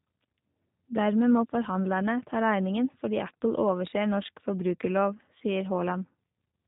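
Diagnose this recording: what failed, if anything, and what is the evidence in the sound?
The codec stage is the culprit here: this has the sound of a G.729 codec from start to finish. Everything above 4 kHz is simply gone, so the speech sounds boxed-in, and there's a plainly audible roughness and synthetic edge throughout. That fits a low-rate model-based coder, likely around 8 kbit/s, which rebuilds each 10 ms frame from a vocal-tract filter, a pitch predictor and a handful of pulses instead of sending the actual waveform.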